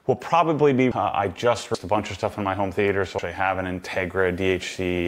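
At 1.74 s the audio jumps forward, a case of compressed frames skipped. Roughly 0.4 s of audio never plays. Whole frames were lost or rejected by the decoder as damaged. The jump fits about 15 frames of 32 ms.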